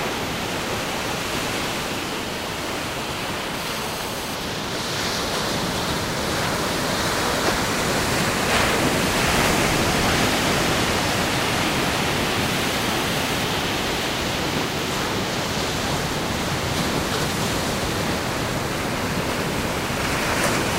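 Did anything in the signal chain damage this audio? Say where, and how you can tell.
Yes. GSM phone buzz from 3.54 to 4.35 s: a hard, raspy 217 Hz buzz with many harmonics, steady as during a call, sits about 13 dB below the sound. A nearby 2G phone's transmit bursts were rectified in the analogue wiring and input circuitry.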